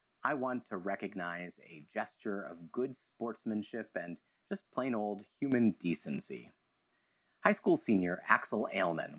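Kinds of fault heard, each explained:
Microphone volume stepped up: The call software judged the microphone too quiet and raised its input level in one step. At 5.52 s, speech and background noise jump together by about 7 dB. The change is abrupt, not a gradual fade.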